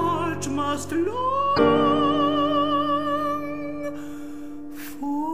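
At 1.53 to 1.59 s, damaged data in the compressed stream produces a short disruption. Corrupted bytes make the decoder misread those frames and lose sync until the next header. The spectrogram shows a brief disruption, and the waveform breaks abruptly.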